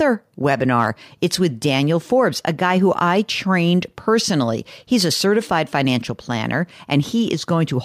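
Nothing in this speech recording stands out as a technical fault, so there's nothing to flag anywhere along its timeline.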